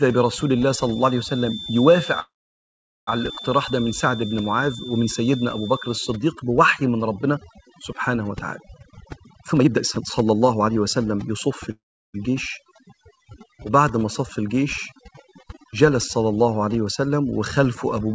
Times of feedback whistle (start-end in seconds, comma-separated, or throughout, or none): 0.00-6.22